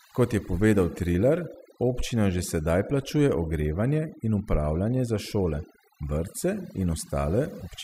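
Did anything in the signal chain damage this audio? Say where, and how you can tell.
Yes. The damage comes from a noise-suppression stage in the processing chain, where overdone noise removal runs through the whole speech clip. Between phrases the background drops to near silence, broken only by twinkling specks. Quieter components of the speech were gated out along with the noise. On a spectrogram the pauses show dark voids dotted with isolated bright pixels, and the speech harmonics look ragged and patchy, with weak upper bands missing.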